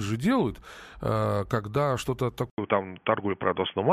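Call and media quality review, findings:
Speech dull and boxy from 2.5 s to end, after an 80 ms dropout. Nothing above 3.4 kHz, level off by a few dB, faint new noise floor. Likely input switched to a poorer device with a narrower band.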